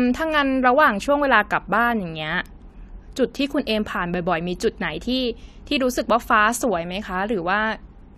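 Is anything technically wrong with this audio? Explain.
Yes. At 2.46 s there is a bit error spike: a single bit flipped in one sample, either in memory or on a digital link, so that sample's value jumped by a power of two and the next sample returned to normal. Because the error lasts only one sample and has nothing to do with the speech, it is heard as one sharp, broadband tick.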